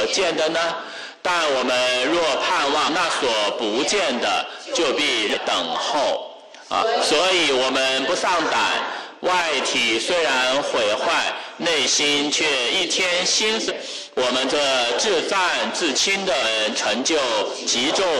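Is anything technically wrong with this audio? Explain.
Yes. Damaged data in a compressed stream shows up five times, at 2.84–2.89, 5.30–5.35, 7.16–7.19, 13.66–13.72 and 16.40–16.45 s. Corrupted bytes make the decoder misread frames and lose sync while it hunts for the next header, producing brief chirps or blips of roughly 30 to 60 ms.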